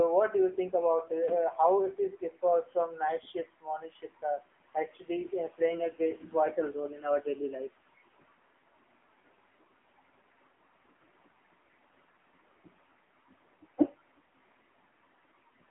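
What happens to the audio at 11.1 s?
At 11.1 s you're hearing the AMR narrowband mobile codec, which runs through the whole clip rather than starting there. The speech is squeezed into a phone band of roughly 250 Hz to 3.5 kHz, with nothing above 3.8 kHz. The vocal-tract model rebuilds the voice from 2 to 10 pulses in each 5 ms, and at what sounds like a fairly low bitrate, around 8 kbps, the voice comes out audibly buzzy and synthetic.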